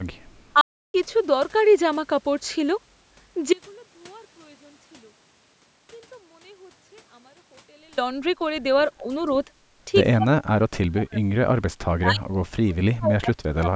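At 0.61 s the speech stops dead. Silence holds until 0.94 s, a gap of about 0.33 s. This is a playback stall. The player likely ran short of data or its thread was held up, so nothing reached the output. The speech then resumes. The break sits in the middle of the flow, not at a natural pause, so it sounds like a hiccup rather than a breath.

From 8.81 to 8.85 s there is an echo leak. A faint, delayed copy of the speech slips through, trailing the original by roughly 219 ms. It sits very low, far beneath the main voice, and lasts only a brief scrap. The likely cause is an echo canceller on a loudspeaker end that did not fully remove what its microphone picked up.

Speech suppressed in double talk follows. The likely cause is an echo canceller that could not tell the talker from loudspeaker echo while both sides spoke, so it turned the talker down. Short, mild dips come from 8.91 to 9.07 s and from 9.46 to 9.50 s. 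From 10.17 to 11.23 s the voice sinks much deeper, almost vanishing in places. From 11.98 s to the end it is heavily ducked again.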